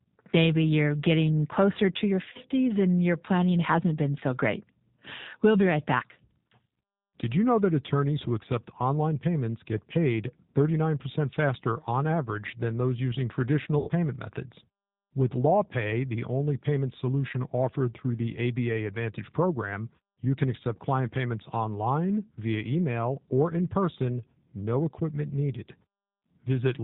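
Throughout, the G.729 codec at 8 kbit/s leaves plainly audible roughness and a synthetic edge; a spectrogram shows nothing above 4 kHz. From 2.30 to 2.40 s, VoIP packet loss concealed by the speech codec fills about 50 ms of gaps scattered over 80 ms with extrapolated sound that fades. From 13.79 to 13.91 s, an 80 ms gap is concealed the same way, with fading extrapolated sound and a sagging waveform envelope.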